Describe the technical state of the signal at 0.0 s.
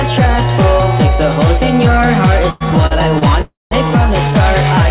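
At 0.0 s the signal is intact, with no fault present, only the narrow band of a telephone-grade call path carrying nothing above 4 kHz, which fits a G.711 mu-law codec at 64 kbps.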